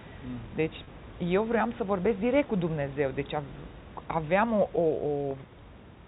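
Packet loss with pitch repetition hits at 0.84 s for 30 ms and at 5.31 s for 10 ms. Repeated pitch periods fill each gap, sounding held and buzzy.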